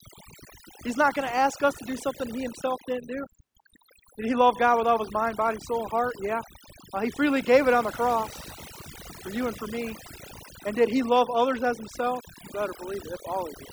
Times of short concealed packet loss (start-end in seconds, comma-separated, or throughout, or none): none